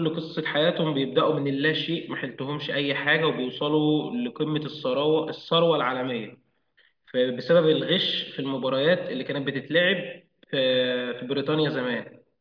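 No technical faults can be heard anywhere in the recording.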